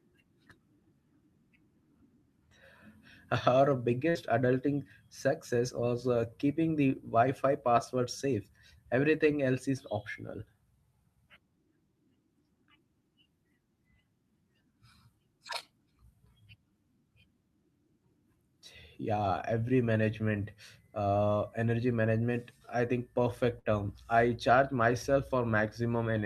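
A speech recording hit by two bursts of packet loss, where consecutive packets went missing or arrived too late and the receiver filled each gap by extending and fading the last sound. At 4.09 to 4.18 s, just before "adulting success was", and at 23.59 to 23.67 s, between "management I think" and "term I charge", about 55 ms of concealment plays as a dying buzz or hiss, and then roughly 60 ms of speech is skipped.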